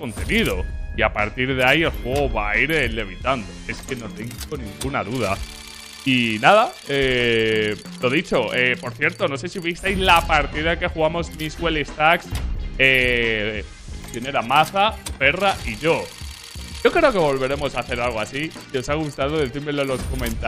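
No technical faults are audible.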